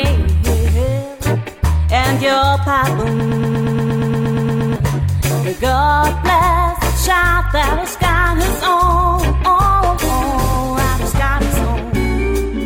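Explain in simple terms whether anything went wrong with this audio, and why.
A broken-record loop runs from 3.2 to 4.76 s: a tiny scrap of sound, about 0.12 s long, plays thirteen times back to back. The player or stream likely stalled and kept repeating its last piece, so the audio meant for that stretch is missing.

A call bitrate drop follows from 7.89 to 12.11 s. The connection told the encoder to squeeze the sound into far less data, so it turns rougher and duller, worst for about two seconds, until more data flows again.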